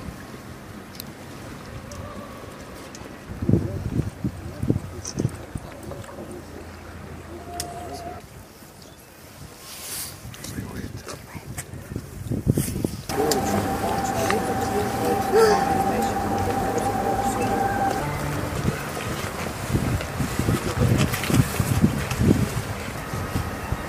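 Nothing in the recording stood out as a problem on listening.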